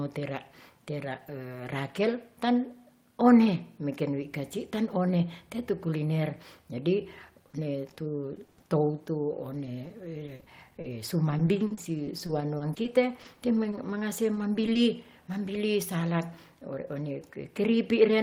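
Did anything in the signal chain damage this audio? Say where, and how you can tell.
Yes: repeated packet loss (robotic sound) on the network path, 7.2 to 15.6 s. Gaps up to 30 ms, refilled by repeating prior audio, appear as smeared spectrogram stutters.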